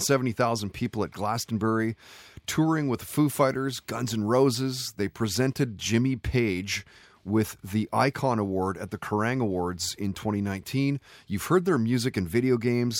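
From 3.46 to 5.46 s, video or display buzz intrudes on the speech: a 59.94 Hz field-rate buzz plus a faint 15.7 kHz line tone, well below the signal, showing as harmonic stripes and a thin high line on a spectrogram.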